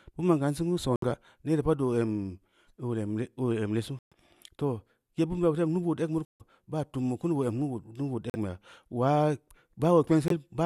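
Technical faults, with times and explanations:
0.90–1.04 s (between "ma’n kan singeu" and "neere pad"), 3.99–4.13 s, 6.25–6.42 s (before "baa tum bu"), 8.30–8.36 s, 10.28–10.32 s: corrupt frame muted. Damaged compressed frames were rejected by the decoder and replaced with silence, so the speech drops out abruptly for 34 to 168 ms. The gaps span one to several frame lengths, and timing after each gap stays intact. The waveform shows flat silent runs with hard edges, and the spectrogram shows clean full-band vertical gaps.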